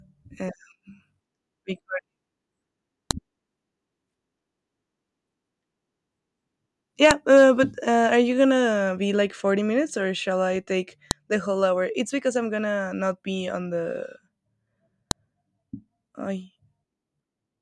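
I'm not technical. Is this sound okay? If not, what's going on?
No. The speech was delivered as separate four-second pieces, and each piece still carried its own file header when the pieces were joined. That header, a small block of technical information that should never be heard, was played as if it were sound. The result is a fault called file header played as audio: a brief, sharp click or snap at 3.11, 7.11, 11.11 and 15.11 seconds, one at the start of each new piece.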